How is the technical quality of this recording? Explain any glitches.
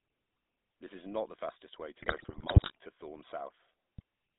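The recording is poor, with plainly audible phone-codec coloring throughout and two bursts of corrupted audio.

The GSM full-rate codec is active for the whole clip. The band runs only from 200 Hz to 3.7 kHz. A pulse-driven vocal-tract model, consistent with 13 kbps, gives the voice a buzzy, gravelly edge.

GSM bit errors occur from 2.0 to 2.77 s, just after "not the fastest way", and again from 3.98 to 4.02 s. Corrupted filter, pitch and gain values distort each frame. The speech breaks into squawks, pops and gargling.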